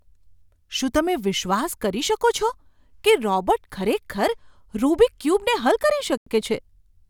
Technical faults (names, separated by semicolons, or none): Bluetooth stall